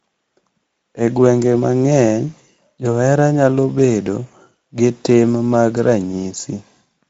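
From start to finish the speech has a plainly audible coarse, hoarse grain, and nothing is heard above about 7.7 kHz. This is Speex codec damage. Speex is a CELP coder that rebuilds the voice from a vocal-tract model driven by a coded excitation signal. At this rate, which points to a wideband mode near 17 kbps, the excitation is coded too sparsely to stay clean, which leaves the roughness throughout.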